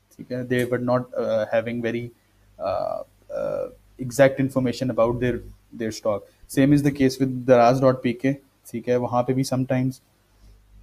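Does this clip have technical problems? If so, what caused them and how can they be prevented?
No, nothing in the recording points to a technical fault, so there is no cause to identify and no prevention needed.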